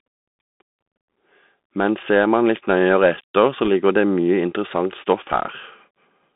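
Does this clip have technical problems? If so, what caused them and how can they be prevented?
Yes. The speech was carried over a Bluetooth CVSD headset codec. That link sends one bit per sample, and each bit only tells the decoder whether to step up or down, with the step size adapting as it goes. The sound fits a 64 kbps CVSD channel. Everything sits in a band of roughly 200 Hz to 3.6 kHz, so the speech is narrow and boxy. Fast, loud high-frequency sounds outrun the step size, which makes s sounds scratchy, and a granular hiss runs under the speech throughout. Using a wideband Bluetooth profile such as mSBC or LC3, or a wired microphone, prevents this.

There are also bit errors on a Bluetooth voice link from 3.65 to 3.68 s, just before "ligger det mye". A small share of bits were flipped, around one or two percent. Because every CVSD bit carries the same small weight and the decoder recovers quickly, there is no sharp click. 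Instead there is a brief rushing, crackly burst over the speech. Keeping the headset close to the receiver and away from crowded 2.4 GHz interference prevents this.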